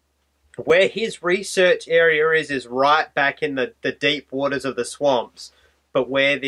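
At 0.70 s there's a single block of digital silence, roughly 2 ms long, where a chunk of samples got swapped for zeros. Most likely the program didn't get its output buffer filled in time, so the audio drops hard to nothing and jumps straight back with no fade either way. With a hole that short you won't really hear a gap. The two abrupt edges merge into one small tick.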